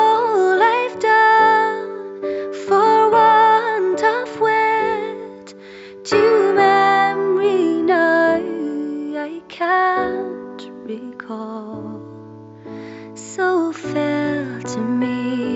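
No technical faults can be heard anywhere in the signal.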